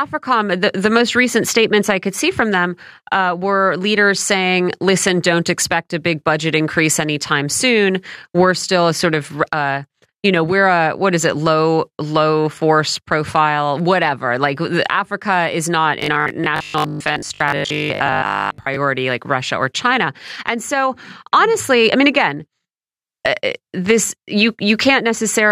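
Between 16.00 and 18.76 s, audio likely arrived too seldom, so the software filled gaps by looping a buffer of about 20 ms, with roughly half the material repeated. This is robotic sound from repeated short buffers: a rigid, metallic 50 Hz buzz over the speech.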